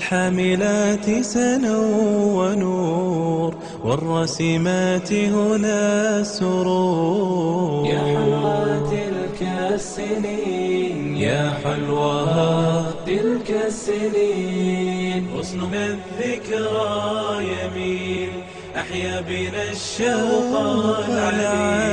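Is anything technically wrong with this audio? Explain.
Yes, the audio has compressed frames skipped at 8.43, 9.57, 12.91 to 12.93, 15.70 and 18.16 s. Each time, whole compressed frames (consistent with frames of about 23 ms) go unplayed, so the sound jumps ahead by roughly 300, 200, 150, 400 and 200 ms. Each join is a brief audible break where the sound skips forward. A waveform shows an abrupt change in envelope, and a spectrogram shows a vertical seam where the patterns break.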